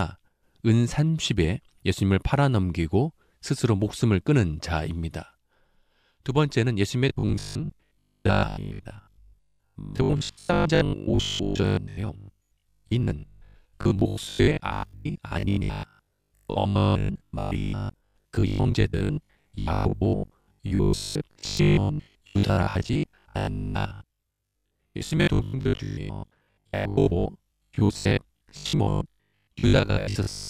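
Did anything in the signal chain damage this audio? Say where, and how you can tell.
Yes. From 7.09 s to 30.49 s the speech turns into robotic sound from repeated short buffers, most likely at the driver or buffer stage. A rigid 50 Hz metallic buzz fits a 20 ms chunk repeating over most of the audio. Unlike codec warble, that buzz holds steady pitch.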